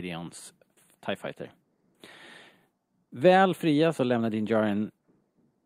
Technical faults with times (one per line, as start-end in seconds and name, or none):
none